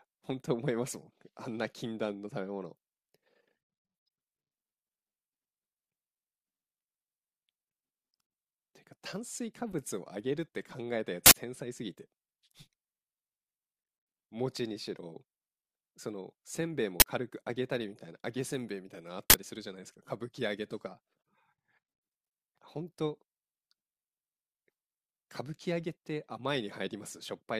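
Audio blocks were played before being written, so leftover memory came out as samples: uninitialised buffer bursts of loud digital noise cut through the speech at 11.26–11.34 s, 17.00–17.02 s and 19.30–19.34 s.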